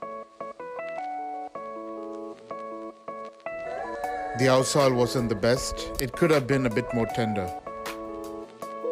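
At about 5.99 s there's an uninitialised buffer: a block got played before any audio was written into it, so whatever junk was sitting in memory came out as samples. You hear a tiny, loud digital crack, roughly 0.7 ms long, which fits a 32-sample block.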